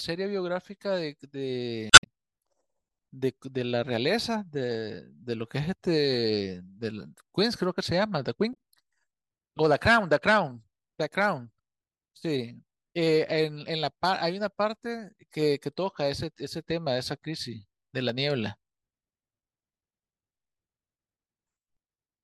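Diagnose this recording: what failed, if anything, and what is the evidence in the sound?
Codec stage: damaged data in the compressed stream. Glitches at 1.90–2.07 s, adding about 52 ms, and at 8.53–8.56 s, where the decoder lost frame sync.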